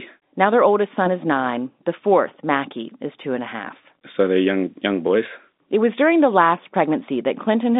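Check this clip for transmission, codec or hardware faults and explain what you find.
No faults are present: the speech sits in the narrow band of ordinary G.711 telephone coding, roughly 200 Hz to 3.7 kHz, which is simply how a normal phone line sounds at this 8 kHz, 8-bit logarithmic format.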